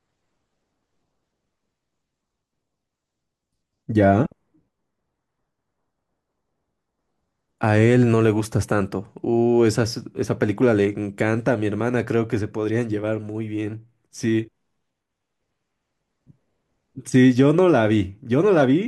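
No technical faults can be heard anywhere in the recording.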